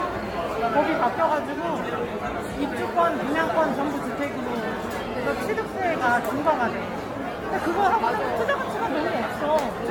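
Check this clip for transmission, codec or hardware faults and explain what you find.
One fault runs through the whole clip: generation loss, most likely from the audio being decoded and re-encoded about ten times through a lossy codec whose character points to AAC-LC at around 96 kbit/s. Each pass requantises on a shifted frame grid, so noise and spectral gaps pile up. The result sounds swirly, hollow and smeared, with blurred attacks and nothing above 17 kHz.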